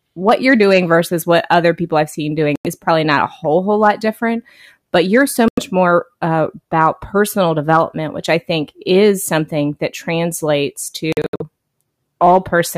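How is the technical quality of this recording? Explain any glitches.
The speech has three short gaps. At 2.56 s and 5.48 s the sound cuts out for about 93 ms each. From 11.12 to 11.42 s it breaks up into several holes totalling about 186 ms, the longest about 70 ms. The sound resumes as though it had kept playing. This is likely a Bluetooth dropout, where audio packets reached the headphones too late and were discarded. On a waveform and spectrogram the gaps appear as flat, empty blocks with sharp edges.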